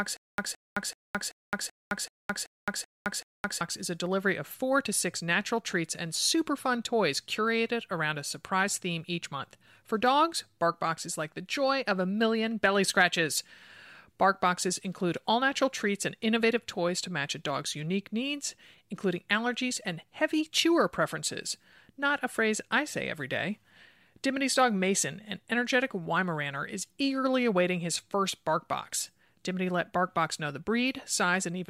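Until 3.61 s, before "is a delivery of", a stutter with silent gaps replays a 167 ms fragment every 382 ms, unlike plain dropouts, likely from a stalled stream.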